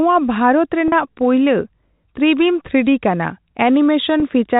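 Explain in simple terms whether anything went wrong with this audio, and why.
Two brief gaps show packet loss with pitch repetition, at 0.88 to 0.92 s and 4.20 to 4.22 s. Pieces of the signal went missing, about 40 ms and then 20 ms. The receiver filled each hole by repeating the last bit of pitch, so the sound briefly holds with a slight buzz. The telephone-style sound comes from G.711 telephone coding.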